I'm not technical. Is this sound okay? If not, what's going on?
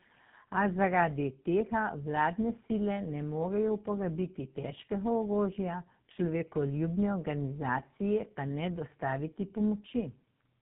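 No. This is tandem speech coding: the call crossed three phone links, two of them squeezing the speech with their own speech coder, so it was compressed twice. Throughout, speech sounds rough, muffled and warbly, with nothing above 3.8 kHz.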